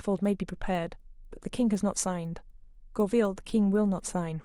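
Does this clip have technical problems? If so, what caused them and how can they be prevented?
Yes. A resampler restarted on every block causes regular ticks throughout the speech, four per second. Each 250 ms block was converted on its own, which fits a 24 kHz to 48 kHz resampler losing its neighbouring samples at every block edge. Keeping one resampler running continuously across blocks, with its filter state carried over, prevents this.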